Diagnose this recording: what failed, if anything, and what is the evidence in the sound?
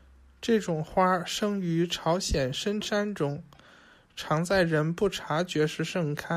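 Nothing in this speech recording points to a failure at any stage of the signal chain. No moment in the clip calls for a diagnosis.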